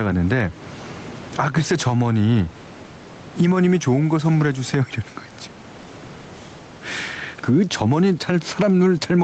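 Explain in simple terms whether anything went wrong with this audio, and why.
Gain pumping runs through the whole clip. Loud and quiet moments sit unnaturally close in level. The likely cause is microphone gain set far too high, with a fast limiter repeatedly pulling it down.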